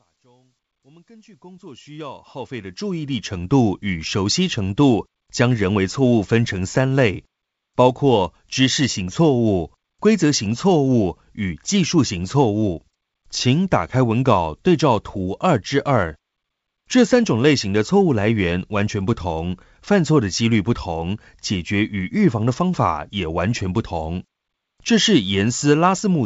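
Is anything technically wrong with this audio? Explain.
No, nothing technically wrong can be heard in this speech clip. The level fades in smoothly over roughly the first 3.5 s, as an editor would shape it, and the band limit near 7 kHz with a light upper-band hiss points to wideband G.722 telephone coding, likely at its full 64 kbit/s rate.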